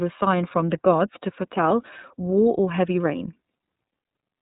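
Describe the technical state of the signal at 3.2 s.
At 3.2 s the speech sounds narrow and slightly rough, with a synthetic edge, and nothing comes through above about 3.8 kHz. This is iLBC codec damage, plainly audible and present throughout the clip rather than just at this moment. The codec codes the excitation of each frame independently, and the texture here fits 30 ms frames at a rate near 13.33 kbps, which gives it that coarse quality.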